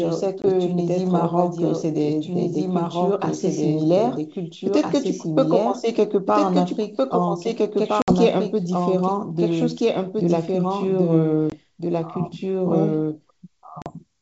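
Speech running through a wideband call, clear up to about 7 kHz as G.722 coding at 64 kbit/s allows, carries a doubled audio track throughout. A second full-band copy at about the same loudness trails the original by about a second and a half. Unlike room echo or reverb, it has no decay and no added colour, just a clean repeat. The likely cause is the same signal being captured again through a slower path, or an edit leaving two copies out of step. There are also four instances of packet loss on an ADPCM call: 0.42 to 0.46 s (20 ms lost, roughly one packet), 8.02 to 8.15 s (60 ms, about three packets), 11.50 to 11.53 s (20 ms), and 13.82 to 13.87 s (40 ms). A plain dropout would only leave a gap. Here each hard-edged hole is followed by a stretch of slight distortion while the decoder's adaptive predictor and step size fall back into step with the sender's.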